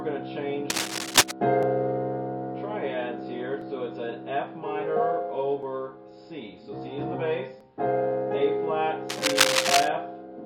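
Cable scratch noise runs from 0.70 to 1.31 s. This is a dense, uneven rustle sitting noticeably above the sound, most likely from a worn cable or connector being moved so that its contact resistance flickered rapidly.

Overlap between stream segments follows at 1.63, 3.62, 5.63 and 7.61 s. Each is a tiny click or skip repeating every 2 s. Where segment timestamps overlapped, the player discarded 6 to 15 milliseconds that were not actually duplicated, so the waveform jumps.

Cable scratch noise returns from 9.09 to 9.88 s with the same rough, scratchy bursts, again likely from a disturbed contact.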